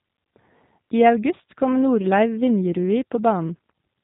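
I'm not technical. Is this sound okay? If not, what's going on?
No, it isn't clean. The whole clip has passed through the G.729 codec, a phone-call compression system that rebuilds speech from a simplified model of the voice instead of storing the actual sound. The damage is plainly audible from start to finish. Everything above about 3.8 kHz is gone, so the speech sounds narrow and muffled like a phone line, and the rebuilt voice has a slightly rough, synthetic edge.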